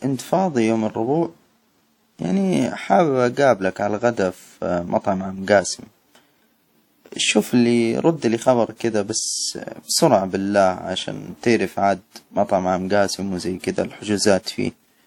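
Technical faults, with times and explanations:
Throughout: WMA compression, likely the cause of the plainly audible ringing and washy smearing on the speech. A transform codec spreads its quantisation error across long blocks and discards weak components, leaving hiss that swells and falls with the signal, which fits a low bitrate near 48 kbps.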